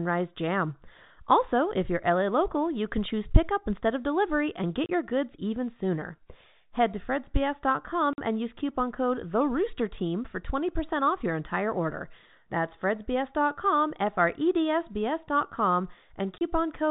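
A speech clip carried over G.711 telephone coding, so nothing above 4 kHz comes through. It suffers packet loss filled with silence. Two gaps of about 30 ms each cut the audio, at 4.86 to 4.89 s, between "instead of delivery and" and "your goods even sooner", and at 16.38 to 16.41 s. Each hole fits one lost 30 ms packet. The receiver played silence in its place. Each gap has abrupt edges.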